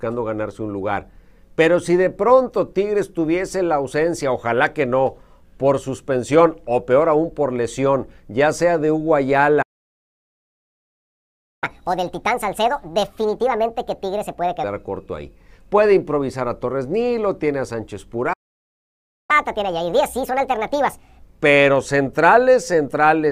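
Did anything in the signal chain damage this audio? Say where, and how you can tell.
Yes. The damage happened at the playback stage, where the player's output went silent twice. There is a playback stall from 9.62 to 11.64 s, lasting 2.0 s, and another from 18.33 to 19.31 s, lasting just under 1 s. The sound cuts off mid-flow each time and then resumes. The likely cause is that the player drained its buffer or had its output thread blocked, so nothing reached the converter until it recovered.

Each stall is followed by catch-up at higher speed, which is the player resampling its backlog to win back the lost time. From 11.64 to 14.64 s, and again from 19.31 to 21.23 s, the audio runs at 1.5 times normal speed. Because speed and pitch rise together, everything sounds roughly seven semitones higher, rushed and chipmunk-like. At 14.64 s and 21.23 s it drops back to normal pitch and tempo.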